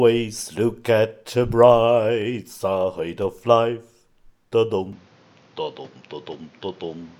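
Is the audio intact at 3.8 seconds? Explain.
Yes, at 3.8 s the sound plays through intact, with no dropout, click, distortion or other fault.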